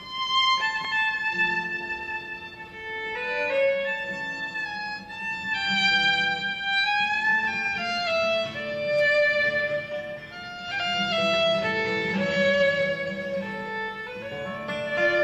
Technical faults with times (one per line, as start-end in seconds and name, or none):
none